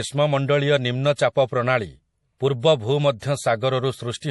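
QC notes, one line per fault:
throughout, MP3 compression: the speech sounds watery and swirly, with nothing above 11.5 kHz and clearly audible codec damage. This is likely MP3 encoding at a low bitrate, which fits around 48 kbps, cutting the treble and switching weak frequency lines on and off between frames.
3.19–3.22 s, pre-echo: a brief hiss of about 23 ms comes just before a sharp attack, which sounds soft and smeared. The codec spread its quantisation noise across the whole block, so noise meant for the loud onset leaked into the quiet moment before it.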